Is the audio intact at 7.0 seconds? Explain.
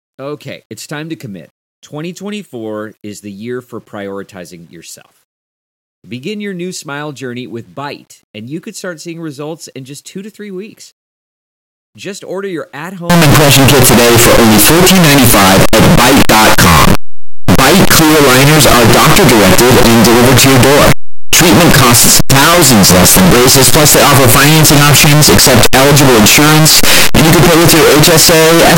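Yes, the speech at 7.0 seconds is intact, with no technical fault at that moment.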